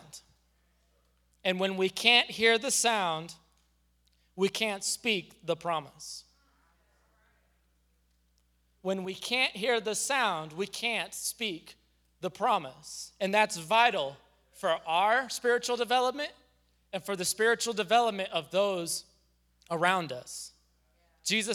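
No technical faults can be heard anywhere in this speech recording. Nothing in it stands out as a problem at any point along its timeline.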